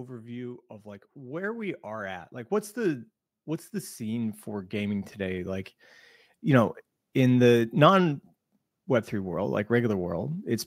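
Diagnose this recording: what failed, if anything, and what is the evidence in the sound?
Automatic gain rising, from 0.67 to 3.1 s and again from 3.97 to 5.79 s, around "what's the": call-processing gain control judged the input too quiet and raised gain by about 8 dB, then about 6 dB, so voice and background swell together gradually.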